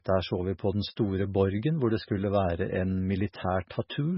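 Throughout, likely MP3 compression starved of bits, pointing to about 16 kbps: treble stops at 5.6 kHz, and the heavy damage makes the speech watery and swirly.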